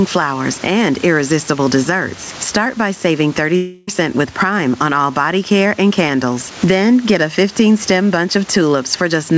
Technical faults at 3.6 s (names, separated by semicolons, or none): gain pumping; long network dropout